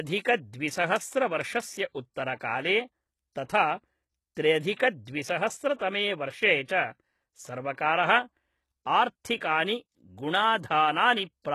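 Speech, with plainly audible codec damage throughout. The top end stops dead above 12.3 kHz, and the treble below that cutoff sounds synthetic: sibilants come out gritty and metallic rather than simply dull. That points to HE-AAC compression, likely at a low bitrate around 16 kbps, where spectral band replication copies lower bands upward instead of coding the real highs. A plain low-pass filter would only darken the sound; here the treble is present but its harmonics don't line up with the body of the sound. Three pre-echoes are also audible, at 3.45 to 3.49 s (46 ms), 4.76 to 4.79 s (31 ms) and 6.64 to 6.68 s (39 ms). In each, a short smear of hiss arrives just before a sharp onset, because quantisation noise sized for the loud attack is spread across the quiet start of the transform block. Unlike reverb or an echo, it comes before the attack rather than after it, and it softens the attack itself.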